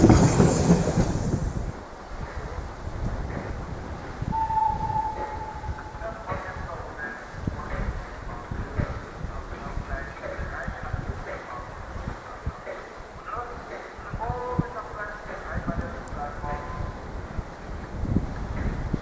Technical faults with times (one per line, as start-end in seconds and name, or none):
none